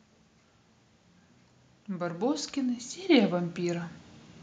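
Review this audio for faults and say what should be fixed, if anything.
From 1.87 s to 3.97 s the level climbs steadily, by about 8 dB. This is automatic gain rising. The gain control judged the input too quiet and pushed its gain up over roughly two seconds. Because it scales the whole signal, the speech and the background noise swell together. The fix is to set a proper fixed input level and disable or slow the automatic gain control so it cannot ride the level mid-recording.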